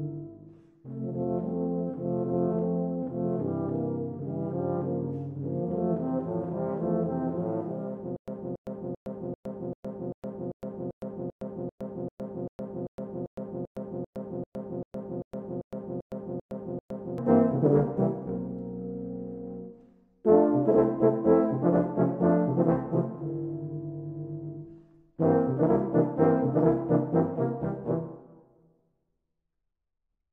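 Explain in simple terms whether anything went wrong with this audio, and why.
From 8.16 to 17.18 s, the same 0.28-second snippet repeats 23 times, each followed by about 0.11 s of dead silence, a steady stutter every 0.39 s. This stutter with silent gaps likely comes from playback stalling and replaying its last fragment, so the real audio there is lost.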